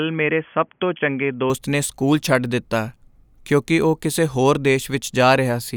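From the start to 1.5 s the speech is band-limited, with nothing above 3.4 kHz, so it sounds dull and boxy. Just before "ਨੇ ਸਕੂਲ ਛੱਡ ਦਿੱਤਾ" it opens out to full bandwidth, with no gap at the change and no obvious jump in level. That opening segment also carries faint background noise well below the speech. The likely cause is an input switched to a poorer device, such as a headset call profile, before the system returned to the better microphone.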